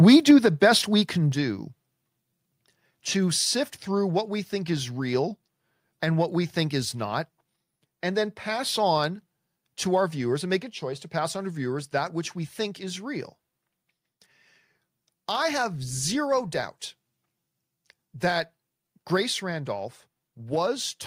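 From 0.07 to 0.31 s, just before "the best we can", the loudest peaks take on a harsh, crackling edge, with the tops of the waveform flattened across a few percent of the samples. This is microphone overload: the input level was likely set about 4 dB above what the converter can hold, so those peaks ran into its ceiling and were sheared off. Squaring off the waveform adds dense harmonics, which is the brittle, gritty texture heard there.

At 1.32 s, right after "the best we can", the whole level falls abruptly by about 5 dB, with the speech and the background dropping together in a single step and no gradual fade. That points to the microphone volume being stepped down, likely by the call software lowering the device's input gain after detecting the earlier overload, rather than to the talker moving away or speaking more quietly.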